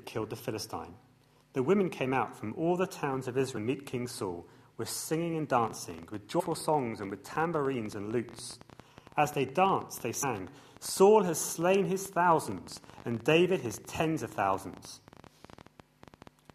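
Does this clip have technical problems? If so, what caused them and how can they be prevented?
Yes. A train of clicks runs from 5.64 to 16.51 s: roughly 150 irregular pops at about 12 per second, peaking near the level of the sound itself, likely from electrical interference or a faulty connection or power supply. Prevent it by isolating cables and grounding, and by using a stable, properly driven interface.

Compressed frames are skipped at 6.39 to 6.41 s and at 10.22 s. The decoder drops missing or damaged frames, and the sound jumps ahead by roughly 150 ms and then 100 ms. The frame length points to 23.2 ms frames. Prevent it by verifying file integrity and using reliable storage and transfer.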